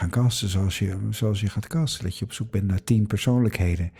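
A speech recording with nothing technically wrong that a listener can pick out, so there are no times or causes to give.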